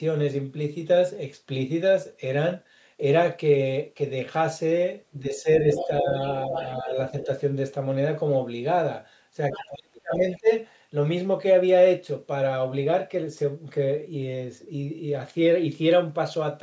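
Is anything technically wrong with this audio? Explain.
Yes, two echo-control faults overlap in the middle of this speech.

There is speech suppressed in double talk at 5.11–6.11 s, 6.48–7.28 s and 9.56–10.49 s. The talker's level dips in patches by roughly 10 dB in the first two and about 35 dB in the last, which nearly cuts it out. The likely cause is an echo canceller that could not tell the talker from the far-end playback and attenuated both.

The other side's voice is leaking through at 5.74–5.88, 6.49–6.88, 7.2–7.26, 9.52–9.66 and 10.32–10.38 s. These are brief, faint fragments of a second voice, roughly 10 to 25 dB below the talker. Residual loudspeaker echo that the canceller likely failed to subtract from the microphone signal reaches the listener.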